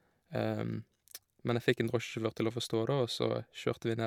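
No technical faults are audible anywhere in the speech recording.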